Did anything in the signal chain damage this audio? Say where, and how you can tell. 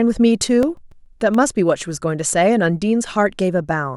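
Yes. CD scratch ticks run from 0.48 to 1.35 s in this speech: seven short, evenly spaced clicks, the longest only a few milliseconds. At playback, a disc blemish passed once per revolution overwhelmed error correction, forcing the player to conceal or mute the damaged samples.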